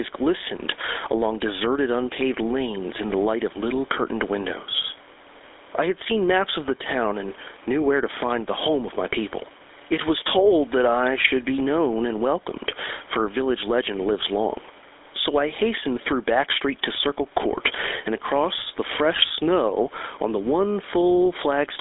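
Gain pumping runs through the whole clip. The gain swings by about 10 dB. Loud and soft parts sit unnaturally close. The likely cause is input gain set far too high, with a fast limiter pulling it back down.

The GSM full-rate codec is also present throughout. It rebuilds speech from a vocal-tract model driven by coarse, regularly spaced pulses. That gives the speech a plainly audible buzzy, gravelly roughness. Nothing passes above 3.8 kHz, which fits the 13 kbps GSM full-rate coder on a telephone line.

Hard clipping hits from 1.23 to 1.28 s, just before "deserted unpaved lanes in". The peaks exceed what one stage can carry by about 1 dB and are sliced flat. The flat tops add high harmonics, heard as a brief crackle on that loud moment.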